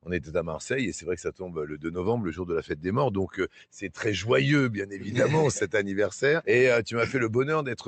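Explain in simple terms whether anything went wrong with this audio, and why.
A noise suppressor designed for speech was left switched on, so the noise suppressor, applied to music or sounds, treats steady parts as noise, making the level rise and fall throughout.

The suppressor also cut sound more heavily at 0.02 to 0.34 s, 1.72 to 1.89 s, 3.48 to 3.65 s and 4.92 to 5.07 s, where the sound briefly sinks and thins.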